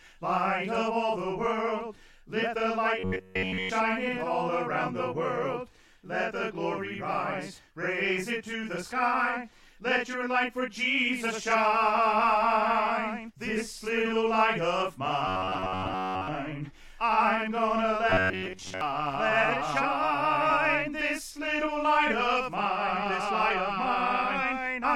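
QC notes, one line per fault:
2.99–3.70 s, 15.28–16.28 s and 18.10–18.81 s: robotic sound from repeated short buffers. The sound turns into a rigid metallic buzz pinned at about 94 Hz, which fits a fragment of roughly 11 ms being looped, likely because new audio arrived too late. The first stretch is almost entirely repeats, while the later two keep some original detail. Unlike dropouts or stutter, there are no silent gaps, just a continuous, fixed-pitch drone.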